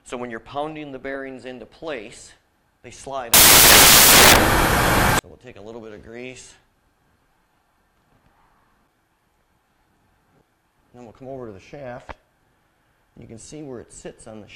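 Loud, harsh broadband noise swamps the sound from 3.34 to 5.19 s: samples built from the wrong bytes, with the fast-changing low bits misread as each value's large part.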